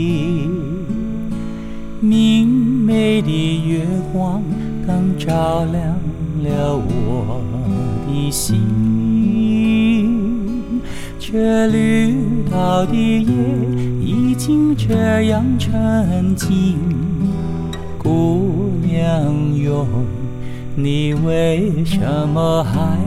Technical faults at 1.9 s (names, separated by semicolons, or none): timecode bleed